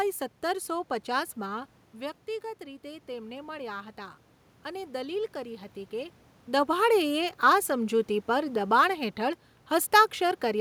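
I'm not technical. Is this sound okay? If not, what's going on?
No, not quite. Just after 1.5 seconds the speaker seems to move away from the microphone and gets quieter. From 1.46 to 5.8 seconds you can hear automatic gain rising: the system notices the level has dropped and slowly turns itself up to compensate. The background room noise swells along with the voice, and it only recovers part of the drop. Around 6 seconds the speaker seems to shift position again.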